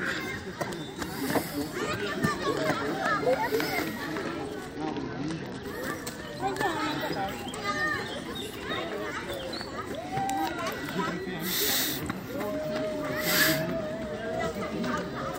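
At 4.76 s the sound suddenly goes dull and grainy, and it stays that way until about 5.63 s. That's a Bluetooth SBC bit pool drop: the link got congested, so the sender cut the bits per frame to keep audio moving. The sharp fall in quality fits a bit pool going from around 28 down to 9, or roughly 78 kbps. With so few bits the top sub-bands get starved and the rest turn coarse, so the treble dulls and a gritty hash sits on everything until the rate climbs back.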